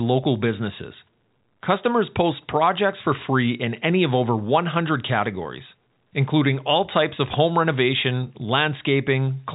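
Nothing stood out on listening to this speech, which carries the narrow band of G.711 telephone coding with nothing audible above about 3.8 kHz.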